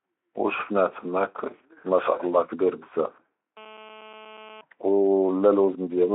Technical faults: GSM phone buzz

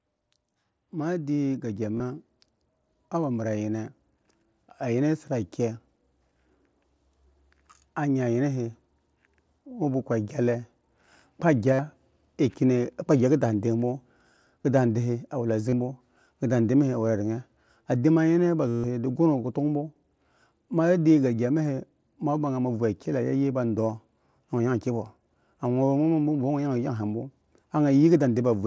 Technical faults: automatic gain rising; concealed Bluetooth headset packet loss

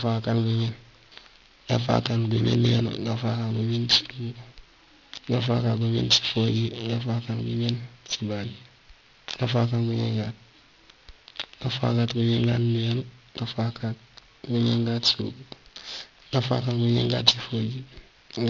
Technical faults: aliasing

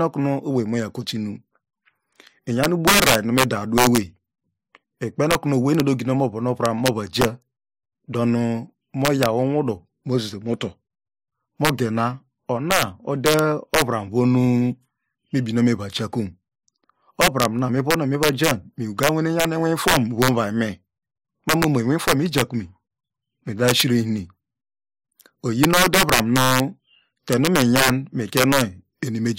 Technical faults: integer overflow

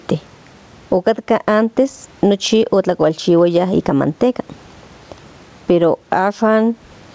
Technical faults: gain pumping

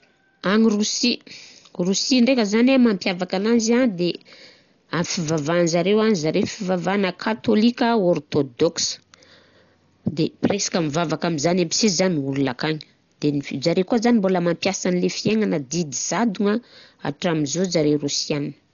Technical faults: Dolby Digital compression

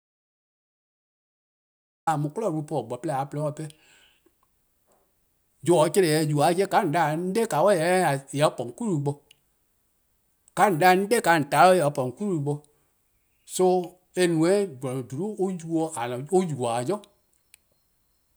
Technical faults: audio dropout to silence

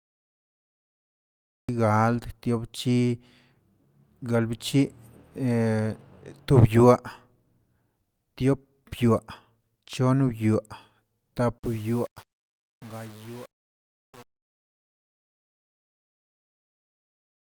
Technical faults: cut-off start; truncation distortion on a fade

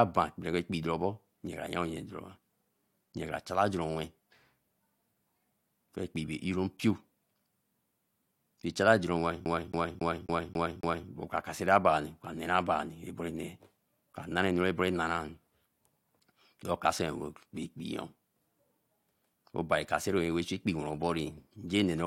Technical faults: CD stuck on one turn

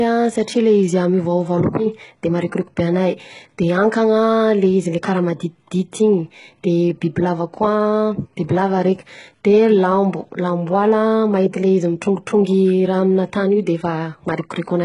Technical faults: HE-AAC compression

